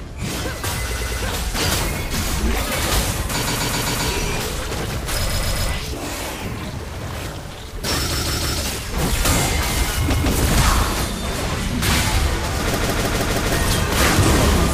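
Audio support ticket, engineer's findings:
Repeated frames at 0.90, 3.41, 5.29, 8.11, 10.13 and 12.74 s: short blocks of about 0.10 to 0.16 s replay one to five extra times, heard as stutter. Likely runs of compressed frames were written or sent more than once, with each stutter lengthening the audio by its repeats.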